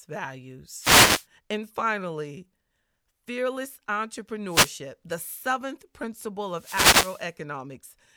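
Wireless microphone noise hits at 0.77–1.26 s, 4.48–4.74 s just before "the seventh", and 6.48–7.33 s right after it: the radio link fades and receiver hiss swishes over the speech.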